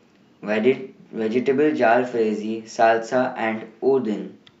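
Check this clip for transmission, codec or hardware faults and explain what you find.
No faults can be heard anywhere in the recording.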